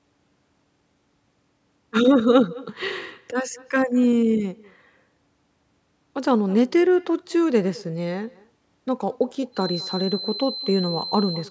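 From the first word to the last, the speech is trailed by an echo with no canceller. The far end is evidently playing the call through a loudspeaker, its microphone is picking that up, and nothing is subtracting it before it returns. The copy arrives around a fifth of a second behind the original, about 24 dB down, so each phrase carries a faint, thin shadow.

At 9.51 s a feedback whistle appears and holds until the clip ends at 11.50 s. It is a narrow tone at 4.1 kHz, sitting roughly 10 dB below the speech, steady in pitch but swelling and fading slowly in level. The likely cause is a speaker-to-microphone path sitting right at the edge of instability, so that one frequency keeps ringing without building into runaway howl. The tone sits well inside the band the call's microphone processing passes, which stops at 8 kHz.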